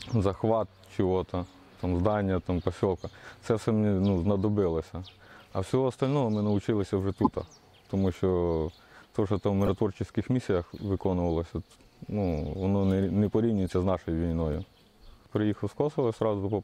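Bit errors in the compressed stream reached the decoder, which played the damaged frames anyway, a corrupt frame decoded fault. Misread gains spray energy into wrong frequencies, giving brief chirpy noise bursts at 7.14–7.27 s (loudest, near -10 dBFS), 9.61–9.68 s and 13.66–13.70 s (faintest).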